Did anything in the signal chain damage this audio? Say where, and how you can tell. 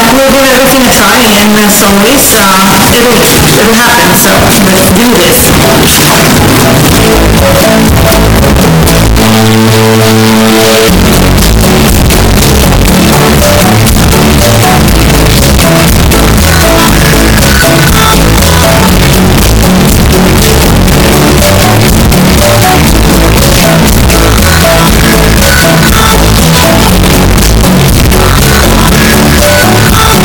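Yes, at sample-format conversion, and it runs the whole way through. The waveform sits as a near-square block at an almost fixed, high level, brutally loud and harsh, with the background as loud as everything else. That's float read as integer: 32-bit float samples likely read as 32-bit integers, so sign and exponent bits set the level.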